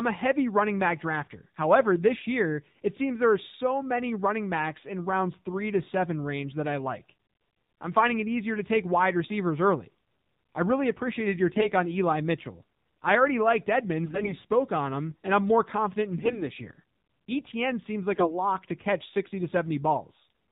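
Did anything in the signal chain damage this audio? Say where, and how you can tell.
Yes. The codec stage left plainly audible damage across the whole clip. The speech is band-limited with nothing above 4 kHz, and it has the buzzy, synthetic texture of the AMR narrowband mobile codec at a low rate, consistent with its 7.4 kbps mode. AMR-NB samples at 8 kHz and rebuilds the voice from a vocal-tract filter driven by a pitch predictor and a few pulses per 5 ms subframe. At this rate, too few pulses and too little spectral detail survive, which gives the synthetic edge.

On top of that, the transmission path introduced AMR bit errors in four bursts: 11.54–11.68 s, 14.06–14.36 s, 16.18–16.49 s and 18.14–18.35 s. In each burst the speech turns hoarse, scratchy and gargly while roughly holding its pitch and level. That pattern indicates that the frames were not dropped and concealed. Instead, the less protected bits were corrupted while the checksum on the core bits still passed, so the decoder placed excitation pulses wrongly and misread fine gain, pitch and spectral values. 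The 14.06 s burst has the highest error rate, around 10 percent, and it spans roughly a dozen frames. The other bursts run at a few percent.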